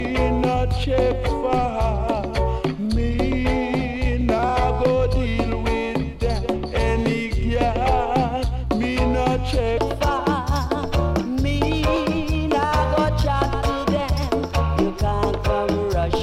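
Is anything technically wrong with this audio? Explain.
Yes. From 0 to 9.8 s there is a section at the wrong speed: the audio runs at 0.82 times normal, likely from playback against a mismatched clock. It sounds slower and about three semitones deeper, and it jumps back to normal at 9.8 s. A pure pitch shift would keep the tempo, but here the timing drags as well.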